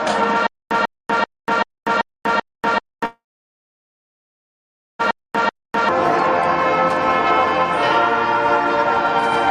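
From 0.47 s to 5.89 s there is a stutter with silent gaps: a 144 ms fragment repeats nine times, every 386 ms, with 242 ms of digital silence between. It likely comes from a stalled player replaying its last fragment. The waveform shows identical blocks separated by flat lines.

Overlapping it, from 3.05 s to 5.01 s, a call audio freeze holds the sound for about 1.9 s. A jitter buffer likely ran empty, so the last sound was extended as a fading buzz or hiss, then about 1.8 s of near-silence. The spectrogram shows smeared horizontal bands fading out. Nothing is lost; the audio resumes late.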